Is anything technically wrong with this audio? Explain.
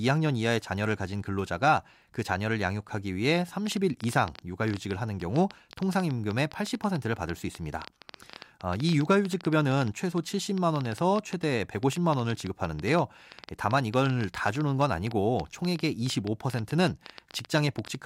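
Yes. A train of clicks runs from 3.67 s to 17.96 s, likely from interference or a faulty connection or power supply injecting repeated pulses. Around 150 near-identical clicks arrive unevenly, about 8.7 per second, peaking roughly 10 dB above the speech and ticking through pauses too.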